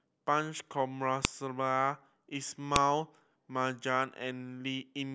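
At 1.25 s and again at 2.76 s the speech is cut by a sharp, loud snap: file header played as audio, where leftover WAV header bytes at a segment join are read as samples. A waveform shows a near-instant spike; a spectrogram shows a thin broadband vertical line.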